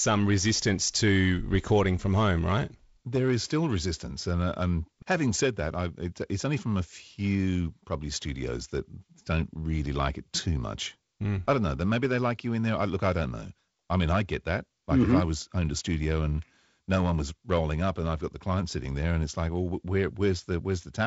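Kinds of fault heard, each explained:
The speech carries no faults, with the wideband telephone coding behaving as designed: content reaching up to a ceiling of 7.7 kHz and only a faint hiss in the upper band.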